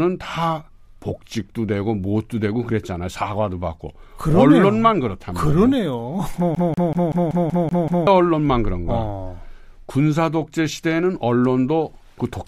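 At 6.55 s the speech falls into a CD stuck on one turn, and it stays there until 8.07 s. A scratch keeps throwing the laser back one track at the same point on every revolution, so the same 0.19 s fragment plays eight times in a row. A brief mute falls at each jump back, and the result is a fast, regular mechanical stutter. The 0.19 s loop length matches one revolution of the disc.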